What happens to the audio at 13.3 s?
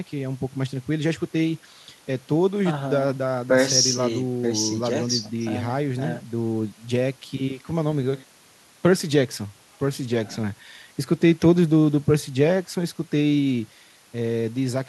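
Nothing goes wrong at 13.3 s; the speech plays through that moment intact, with no dropout, click or distortion.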